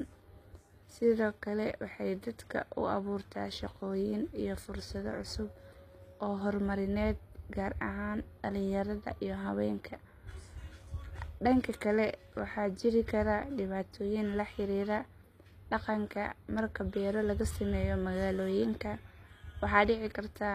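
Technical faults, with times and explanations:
Throughout, HE-AAC compression: the treble sounds synthetic, with s sounds coming out gritty and lispy, and nothing above about 14.9 kHz. That's likely the band replication copying lower bands upward, which fits a low bitrate around 24 kbps.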